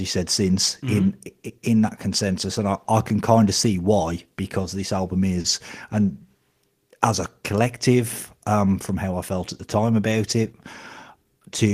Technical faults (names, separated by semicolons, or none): short stall from a late packet